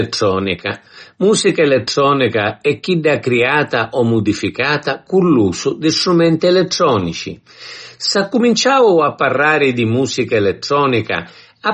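From start to end, the speech carries plainly audible damage, likely from MP3 compression. Nothing sounds above 8.4 kHz. Starved of bits, the encoder dropped the treble and weak detail, leaving a watery swirl and metallic chirps on s sounds. That fits a bitrate near 32 kbps.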